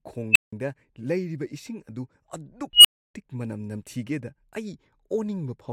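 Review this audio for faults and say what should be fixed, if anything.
Two bursts from an unstable filter interrupt the speech, at 0.32 to 0.53 s and 2.73 to 3.15 s. Each time, a squeal around 3 kHz swells fast and clips. It builds in 37 ms the first time and 115 ms the second. A recursive filter's feedback is running away. Then its values overflow and the output drops out for 171 ms and 299 ms. Checking filter coefficients for stability before use would prevent it.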